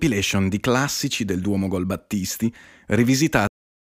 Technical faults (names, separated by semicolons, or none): cut-off end